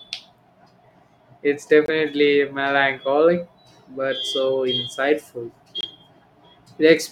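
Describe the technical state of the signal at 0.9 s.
At 0.9 s the speech signal is intact, with no audible fault at that moment.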